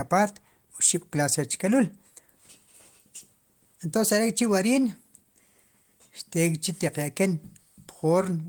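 Nothing here stands out as a technical problem; it's a speech recording that holds together with no audible faults to point to.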